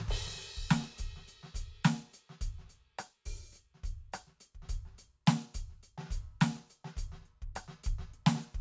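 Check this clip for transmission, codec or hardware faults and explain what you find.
Listening to the music, nothing stood out as a transmission, codec or hardware problem.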